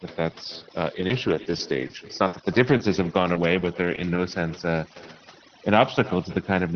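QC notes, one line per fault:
Throughout: overdone noise removal. Background sinks to near silence with twinkling specks; weak frequency bands are gated off.
Throughout: echo with no canceller. A thinner copy trails every phrase by roughly 300 ms at about 21 dB down, the far loudspeaker's return never subtracted.
0.95–4.33 s: scattered short gaps. About ten brief holes, the longest near 70 ms, patched by stretching the last sound into small ticks and smears, unlike one continuous dropout.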